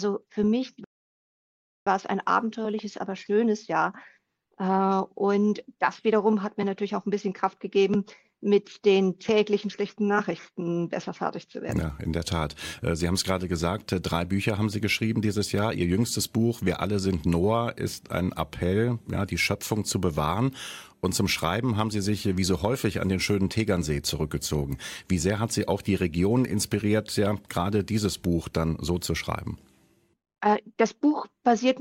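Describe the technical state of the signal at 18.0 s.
At 18.0 s the signal is intact, with no dropout, distortion, glitch or other fault to be heard at that point.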